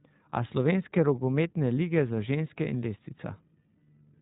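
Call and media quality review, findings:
iLBC codec artefacts throughout speech: band-limited below 4 kHz, rough, slightly synthetic texture; per-frame independent excitation coding, consistent with 20 ms frames at around 15.2 kbps.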